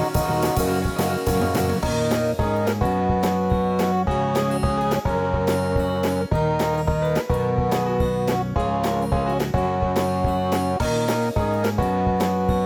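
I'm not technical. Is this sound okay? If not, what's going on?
Yes, this one's fine; I listened all the way through and nothing went wrong anywhere.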